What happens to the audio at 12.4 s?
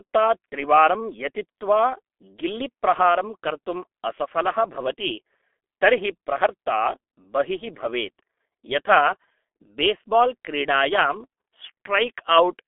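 At 12.4 s the speech still carries G.723.1 codec damage, present throughout. Its coarse 30 ms frames blur consonants into a muffled, hoarse sound that fits a 6.3 kbit/s stream. A spectrogram shows energy only between about 250 Hz and 3.5 kHz, with nothing above 3.8 kHz.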